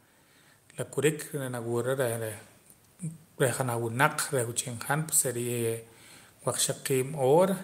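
Automatic gain rising runs from 1.32 to 2.45 s, just after "la kurik": the gain control judged the input too quiet and lifted its gain by about 4 dB over roughly a second, so the speech and the background swell up together.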